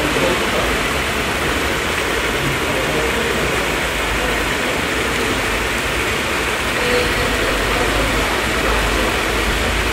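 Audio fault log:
5.46 to 9.53 s, periodic USB or driver dropouts: about every 1.01 s a small chunk of audio, around 10 ms, just vanishes and the sound jumps straight ahead, so you get a regular tick, roughly five of them, like something hogging the USB bus or driver on a timer.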